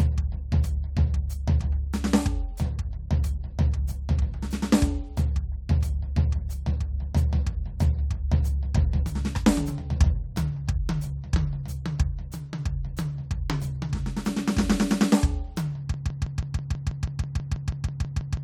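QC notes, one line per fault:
15.94 s to the end: broken-record loop. The music suddenly stops moving forward and a snippet of about 162 ms plays again and again, back to back, with no gap. You hear it roughly fifteen times, a fast stuttering chatter of identical repeats. The likely cause is a stall in the player or stream that kept re-sending the last fragment it held, so whatever should have played in those closing seconds never arrives.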